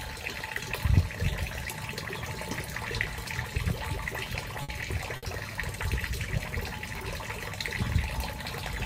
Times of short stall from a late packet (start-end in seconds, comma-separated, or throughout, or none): 4.63-4.72, 5.17-5.26